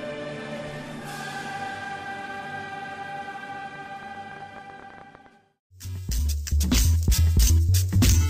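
A train of clicks runs from 3.76 to 5.27 s, about 12.6 per second at an uneven pace, roughly twenty alike pulses peaking near the audio's own level, likely from electrical interference or a faulty connection or power supply. They appear as sharp waveform spikes and thin vertical spectrogram lines.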